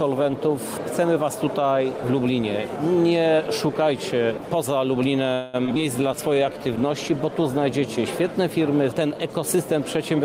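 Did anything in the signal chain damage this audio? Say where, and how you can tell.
Yes. Call audio freeze, 5.33 to 5.56 s, at the network stage: the sound stretches into a fading buzz or hiss for about 204 ms, likely packets stalling and draining the jitter buffer, then resumes intact.

Short concealed packet loss at 5.64 and 5.67 s, network stage: two brief smears where roughly 20 ms each went missing and was bridged with about 8 ms synthesised from preceding sound.

Skip ahead at 5.75 to 5.77 s, in the network or jitter buffer: playback jumps forward, dropping about 70 ms, with the two sides spliced almost directly.

Call bitrate drop, 6.00 to 7.70 s, at the codec: coding falls from 32 to 18 kbps, turning the sound rougher, bottoming out for about 1 s.

Jitter buffer slow-down, 6.08 to 6.77 s: repeated pitch periods add 89 ms, so audio plays at 88% speed with unchanged pitch and drawn-out sounds.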